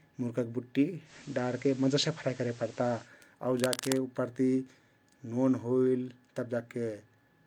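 After "मुर्गा बुट्टी", at 1.04 s, digital radio blending to analogue sets in. The receiver cross-fades to FM over about 0.1 s. Hiss rises, and level shifts about 2 dB until 3.11 s.

From 3.55 to 3.98 s, dense, uneven scratching sits nearly as loud as the speech. This is cable scratch noise, likely from a worn connector being moved.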